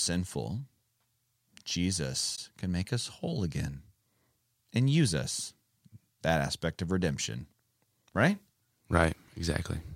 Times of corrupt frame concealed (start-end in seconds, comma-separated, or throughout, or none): 2.35-2.39